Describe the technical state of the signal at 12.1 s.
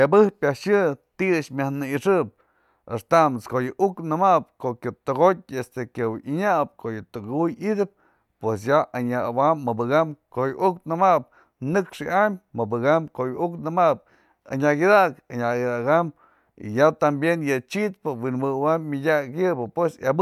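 At 12.1 s the speech signal is intact, with no dropout, distortion or other audible fault.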